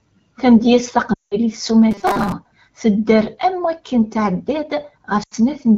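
From 1.13 to 1.36 s the speech quickly drops to near silence before recovering roughly. These are lost AMR speech frames: corrupted frames over roughly 180 ms forced the decoder to repeat its last good pitch and vocal tract settings at shrinking gain, which fits about nine 20 ms frames.

Between 1.91 and 2.33 s, just before "tedder am waken", the speech turns into a rigid metallic buzz near 200 Hz that still roughly follows the words. This robotic sound from repeated short buffers likely comes from audio arriving too seldom, so the software looped the last few milliseconds and skipped around half of the real audio. The 200 Hz pitch fits a 5 ms buffer.

At 5.23 to 5.34 s a shorter stretch of lost AMR speech frames gives a brief drop to near silence over about 80 ms. This points to roughly four missing frames concealed the same way before the wideband speech resumes.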